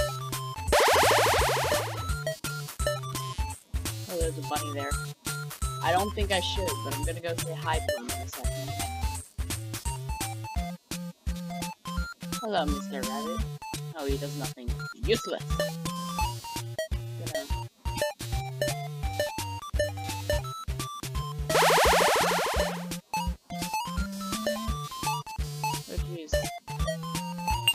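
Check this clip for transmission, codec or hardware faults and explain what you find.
A hardware fault is present: computer activity noise runs through the whole clip. Changing load on the computer's processor, graphics or input hardware shifts the ground that the audio circuitry shares, and that ground disturbance is picked up as part of the signal. It is heard as a buzzy, chirping pulse train at around 200 per second, sitting roughly 20 dB below the sound, which fluctuates with the machine's workload rather than following the audio itself.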